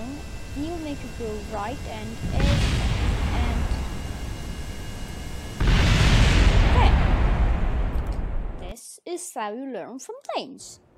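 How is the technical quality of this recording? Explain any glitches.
Nothing here needs explaining, since I can't hear a single glitch anywhere in the recording.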